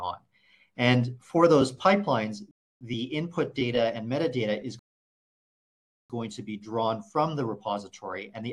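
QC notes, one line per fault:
2.51–2.81 s and 4.79–6.10 s, rebuffering stall: the player drained its download buffer and halted until more data arrived. The sound drops to silence for 0.3 s, then 1.3 s, and picks up exactly where it stopped, so nothing is skipped but time is added.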